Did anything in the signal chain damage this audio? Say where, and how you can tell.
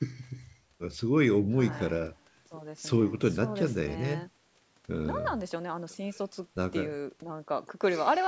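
Yes. From the start to 2.53 s the speech is roomy and hollow, thin in the bass, about 5 dB quieter, with room noise around 35 dB below it, then abruptly turns close. This likely reflects a switch to a distant microphone at capture.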